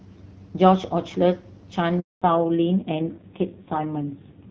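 A network handover at 2.00 s stalled the speech frames, so the speech on this phone call fades out and leaves a 220 ms handover gap of silence until 2.22 s. The call then dropped in a fallback to narrowband: from 2.22 s to the end, everything above 4 kHz is gone and the speech turns duller and rougher, consistent with a low-rate narrowband codec around 5.9 kbit/s replacing the earlier HD Voice stream, which before the gap sounds clear with only light coding damage, as expected of wideband at roughly 12.65 kbit/s.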